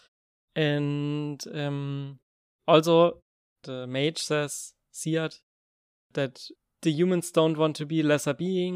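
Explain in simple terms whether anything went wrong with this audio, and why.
Nothing went wrong here: the speech comes through as it should, and the quiet gaps where the background drops to silence between phrases are just the system doing its job.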